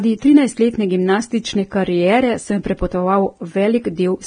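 Speech, with heavy Vorbis compression throughout. Nothing is left above 9.7 kHz. The treble sounds hissy and grainy, with blurred attacks. This likely comes from low-bitrate encoding, which fits roughly 23 kbps.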